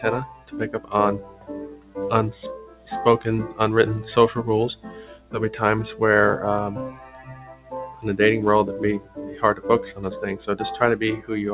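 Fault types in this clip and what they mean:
Noise suppressor applied to music or sounds: A speech-oriented noise suppressor stayed active on non-speech audio. It treated sustained tones, ambience and decaying tails as noise and attenuated them, while sharper onsets passed largely intact. Gain swung by roughly 15 dB across the clip, giving audible pumping and a thinned, unsteady body to held material. The call path's band-limit, with nothing above 4 kHz, fits a G.711 A-law link and sits beneath this effect.
Sound cut by the noise suppressor: These are specific stretches where the suppressor judged the sound to be noise and pulled it down harder than its surroundings. Drops reached about 12 to 14 dB at 0.0–1.97 s, 2.57–2.87 s, 4.75–5.34 s, 6.91–8.05 s and 8.99–10.0 s. Steady and fading portions sank in level or had their decays truncated, leaving the sound hollowed out and intermittently ducked within those windows.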